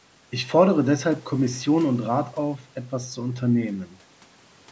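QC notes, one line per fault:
No fault found: the speech has passed through a call's microphone processing, which rolls off the lowest bass and leaves content reaching up to about 8 kHz, as expected for that path.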